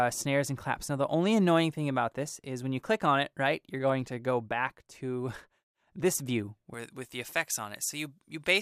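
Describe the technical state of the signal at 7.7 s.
At 7.7 s, pre-emphasis is left on. It runs from 6.74 s to the end at 8.62 s. The treble was boosted and never cut back, about 11 dB at 10 kHz, which fits a J.17 curve. The sound turns thin, bright and sibilant.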